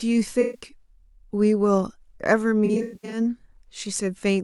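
From 0.41 to 0.60 s, about 128 ms of the speech turns smeared and phasey, with the decoder recycling its last good spectrum. This is AAC frame loss with concealment. From 2.65 to 3.20 s, 320 ms goes missing in scattered gaps over about 470 ms, the longest near a tenth of a second, giving a broken, noisy texture. Unlike a plain dropout, the gaps are filled with smeared, reused sound rather than going silent.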